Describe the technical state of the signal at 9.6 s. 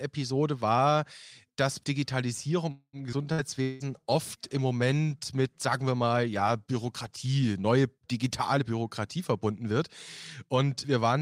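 At 9.6 s the speech is inside a jitter buffer speed-up running from 8.57 to 9.71 s. The receiver, holding excess buffered audio, repeatedly cut short pitch-period segments, around 150 ms in total, so playback runs at 114% with unchanged pitch and sounds hurried.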